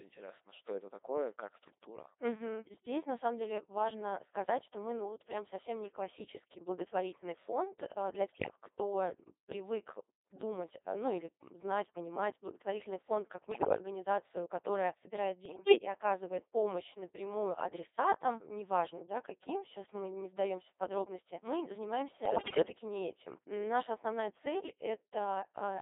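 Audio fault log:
Throughout: Codec 2 vocoder. The speech is robotic and buzzy, with heavy damage, squeezed into a band of about 300 Hz to 3.7 kHz. The decoder does not carry the original waveform. It rebuilds each frame from sine waves driven by pitch, voicing, energy and a coarse spectral envelope, so natural texture is replaced by synthetic tone. The sound fits a very low rate of about 2.4 kbit/s.
8.33 to 8.56 s, 13.52 to 13.78 s, 15.46 to 15.78 s, 22.26 to 22.66 s: bit errors on digital voice radio. In each burst the synthetic voice lurches in pitch, level and tone colour and breaks into bleeps, warbles and robotic gibberish. The bursts last 0.23, 0.26, 0.32 and 0.40 s. Corrupted bits, from somewhere around one in twenty to one in seven, reached the vocoder. Each bit helps set the pitch, level, voicing or spectrum of a whole frame, which fits roughly ten to seventeen frames being spoiled per burst.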